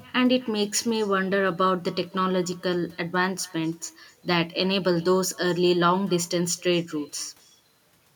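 Echo with no canceller runs through the whole clip: the far end's loudspeaker feeds its microphone, nothing subtracts it, and the speech returns around a third of a second later as a faint, thin copy, about 28 dB below the original.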